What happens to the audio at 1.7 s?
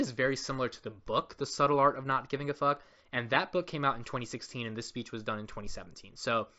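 Nothing goes wrong at 1.7 s: the speech carries on intact through that moment, with only the narrowed top end of the Bluetooth mSBC headset link, which passes nothing above about 7.7 kHz.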